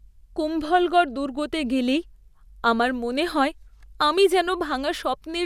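Speech recording with no audible technical faults.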